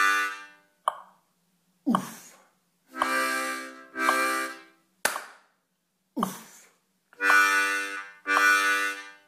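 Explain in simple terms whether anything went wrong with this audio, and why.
Nothing stood out as wrong when listening to this audio.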